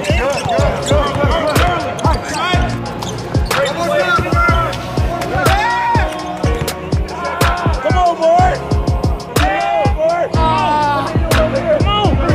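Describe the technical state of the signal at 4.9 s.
At 4.9 s the signal carries GSM phone buzz, running from 3.77 to 5.13 s. A nearby phone in a call bursts 217 times a second, and the audio circuit rectifies those pulses into a steady, hard rasp at about -27 dB relative to the signal. On a spectrogram it shows as evenly stacked horizontal lines at 217 Hz and its harmonics; the waveform carries a regular pulse train.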